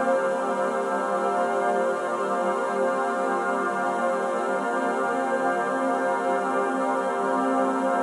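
No technical faults in this music.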